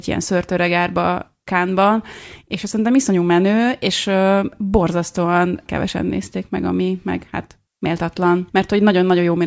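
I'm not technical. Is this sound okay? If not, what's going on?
Yes, nothing wrong can be heard in this recording.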